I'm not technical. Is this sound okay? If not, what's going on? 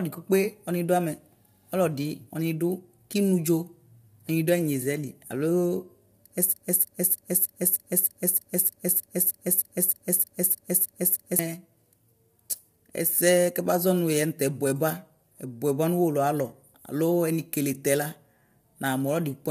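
No. From start to finish the voice sounds rough and grainy, with a hiss caught between the tones of the voice and the very top of the sound missing. This is low-delay AAC compression, likely from the kind of audio squeezing used in video calls, which works in very short chunks to keep delay down and can't capture the voice's tones cleanly. It affects the whole clip, so it is not a brief glitch.

The second problem is a broken-record loop from 6.53 to 11.39 s. A piece of speech about 0.31 s long plays 16 times in a row, identical each time, because the stream likely stalled and kept resending the last bit it had. Whatever should have been said during those five seconds is gone. Unlike an echo, the repeats don't fade, and unlike a stutter, they are exact copies.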